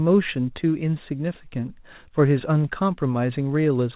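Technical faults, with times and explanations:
No technical faults can be heard in this speech clip. The mu-law G.711 telephone coding at 8 kHz holds the sound below 4 kHz, with a faint hiss about 38 dB under the speech that rises and falls with its level.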